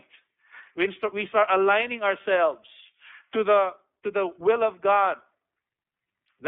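Throughout the speech, iLBC codec damage is plainly audible. Each 30 ms frame is coded independently, which fits the 13.33 kbps mode, giving a rough, synthetic timbre. A spectrogram shows energy confined to 250 Hz–3.5 kHz, with blurred, blocky harmonics.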